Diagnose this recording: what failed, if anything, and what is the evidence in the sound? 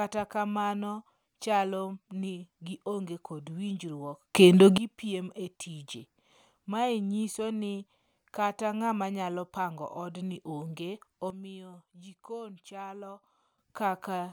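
Sudden gain jump, from 4.35 to 4.78 s and again from 11.30 to 13.58 s. The speech and the background noise step up together by about 17 dB in the first span, just before "gipiem e tije", then fall by about 11 dB in the second. Because signal and noise move as one, the change sits after the microphone, in the digital chain. The likely cause is a gain setting in the driver or call processing applied without a ramp.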